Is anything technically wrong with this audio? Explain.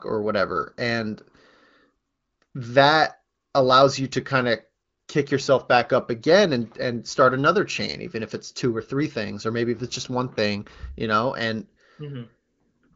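No, the speech carries no technical faults, and what can be heard of its path is an AMR wideband (HD Voice) connection at a rate that fits 18.25 kbit/s, with any coding damage faint at most and the content stopping at about 7.5 kHz as that band limit dictates.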